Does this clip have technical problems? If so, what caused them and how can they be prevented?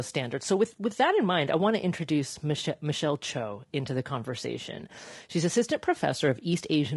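Yes: throughout, the speech sounds rough and grainy, with noise between harmonics, likely from low-delay AAC compression at a rate near 32 kbps, whose short frames resolve pitch poorly. Raising the bitrate or using a codec with longer frames would prevent it.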